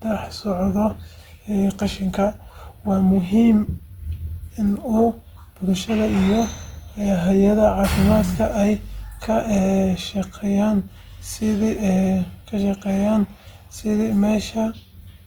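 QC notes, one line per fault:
Throughout: Opus compression. The speech sounds plainly grainy and rough, turned noisy rather than swirling, yet the top end stays open, with content reaching about 20.1 kHz. This is likely low-rate Opus in its music (CELT) mode, which keeps each band's energy but, short of bits, fills fine detail by copying lower bands or injecting noise. The damage level fits a rate around 24 kbps at fullband.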